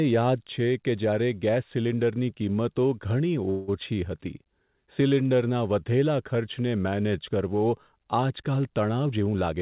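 At 3.5 to 3.7 s a call audio freeze fills about 0.18 s with a fading buzz, likely from delayed packets emptying the jitter buffer; nothing is lost. From 9.07 s to the end, a jitter buffer speed-up trims pitch periods, roughly a tenth of a second in all, so the speech runs at 119% with unchanged pitch. All of it sits in a band capped at 4 kHz, which fits G.711 mu-law.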